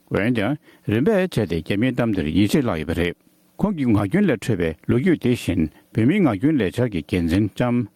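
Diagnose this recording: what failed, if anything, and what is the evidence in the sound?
Gain pumping throughout, at the input and limiter stage: the background swells around 10 dB in gaps and ducks under each loud sound, rather than cutting to silence like a gate. The likely cause is input gain set far too high, driving a fast limiter.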